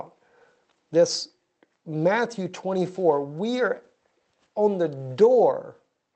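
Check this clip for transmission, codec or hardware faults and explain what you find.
Nothing stood out on listening, and the sound comes through the Opus call path as expected.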